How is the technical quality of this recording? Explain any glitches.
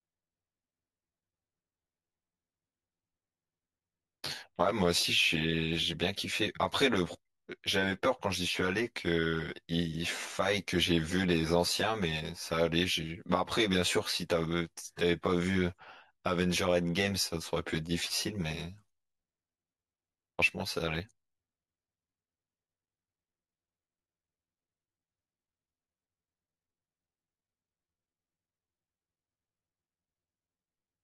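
The speech has one fault, channel delay (comb filtering), present throughout. One channel lags the other by about 10 ms before both are summed to mono. Shared sound cancels at evenly spaced frequencies, starting at around 40 Hz. The speech sounds hollow and phasey.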